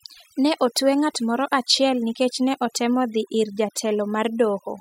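From start to finish, the speech carries overdone noise removal. The denoiser was pushed too hard. Each frequency band that sits close to the estimated noise gets pulled far down or shut off. The quieter parts of the speech fall into those bands and vanish with the noise. Between phrases, the background drops to near silence, dotted with twinkling specks.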